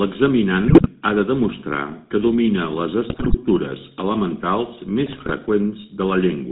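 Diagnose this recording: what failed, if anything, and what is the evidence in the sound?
The codec stage failed to preserve quality. The whole clip carries the buzzy, gravelly roughness of the GSM full-rate codec. Nothing survives above 4 kHz, so the speech sounds muffled and boxed in. The coder models the vocal tract and excites it with a regular pulse train built from only every third sample. That coarse excitation produces the grainy buzz. The damage is plainly audible and fits a 13 kbps full-rate channel.

The network link also failed, with GSM bit errors in three bursts. They fall at 0.68 to 0.87 s, 3.10 to 3.37 s and 5.06 to 5.31 s. In each burst the speech turns to squawks, pops and gargling for about 0.2 to 0.3 s. Corrupted bits reached the decoder as damaged filter, pitch and gain values. That warps the spectrum and throws the level off frame by frame. The middle burst has the highest error rate, 5.62 percent across 13 frames.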